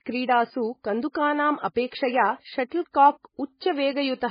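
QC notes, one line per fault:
Throughout, MP3 compression: the speech has nothing above 5 kHz and a heavily watery, swirling texture with smeared onsets. This is likely a low-bitrate MP3 encode, fitting about 16 kbps, where starved bits force a treble cut and weak frequency lines flicker between frames.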